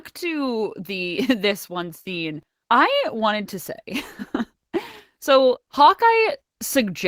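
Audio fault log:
throughout: clock drift between sender and receiver. The sending side's clock runs fast, by something like 4 percent, so audio arrives quicker than the receiver plays it out and its jitter buffer keeps filling. Unlike random network jitter, the trouble never settles or reverses. It is a steady one-way pressure across the whole speech clip, and it forces the receiver into continual small edits rather than occasional isolated glitches.
0.15–6.88 s: repeated timing corrections. To shed the surplus, the receiver keeps trimming short slivers out of the speech. The net effect is that the audio runs at about 103 percent of its natural pace, with faint hiccups and a slightly unsteady, hurried tempo. Packet loss leaves gaps or smeared concealment. Here nothing drops out, and every edit removes material in the same direction at uneven spacing.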